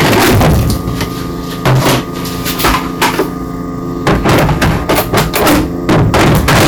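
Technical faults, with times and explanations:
Throughout, hard clipping: the signal reaches a stage about 40 dB hotter than it can pass, so nearly a third of the samples are cut flat. Those squared-off tops spray harmonics high up the spectrum, giving every loud moment a harsh, buzzing fuzz.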